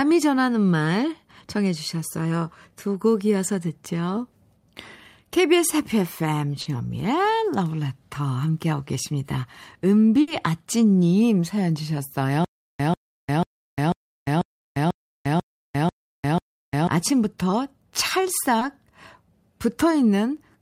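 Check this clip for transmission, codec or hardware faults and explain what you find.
The speech shows three kinds of fault: brief concealed dropouts, longer packet-loss bursts, and a stretch of repeating stutter.

Short concealed packet loss at 6.61 to 6.67 s and 18.59 to 18.63 s sounds like a brief smear. About 40 ms and 20 ms never arrived, and the decoder extended the preceding sound to cover each gap.

Bursts of packet loss at 10.21 to 10.29 s and 14.59 to 14.67 s are heard as a held, fading buzz or hiss, then a jump ahead. About 60 ms was lost each time and filled with decaying continuation.

Stutter with silent gaps runs from 12.45 to 16.87 s. A 141 ms fragment returns nine times every 492 ms, separated by about 351 ms of dead silence. The likely cause is a stalled stream replaying its last buffer on each retry, and the intervening audio is lost.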